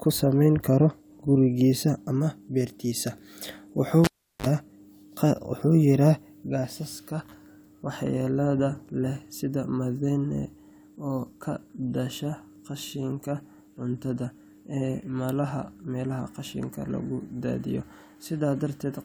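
At 4.04 s a live cable is pulled and plugged in again. The break gives a pop and 0.37 s of near silence. As the tip touches, a 39 ms burst of 50 Hz mains buzz sounds, then a second pop returns the speech at 4.46 s.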